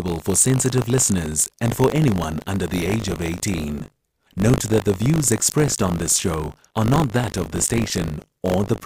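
Speech with buffer tearing throughout: a 50 Hz robotic rattle, present only while sound plays, unlike mains hum. About a twentieth of each buffer repeats audio roughly 40 ms old.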